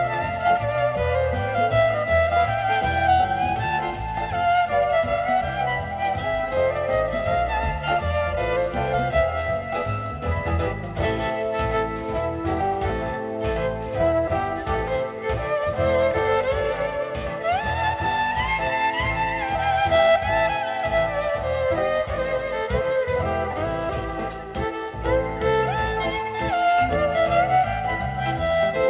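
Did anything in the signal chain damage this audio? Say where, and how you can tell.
Yes. Aliasing runs throughout. A drop to 8 kHz in sample-rate conversion skipped the anti-alias filter, so content above 4 kHz folds back as gritty, unrelated tones roughly 25 dB down.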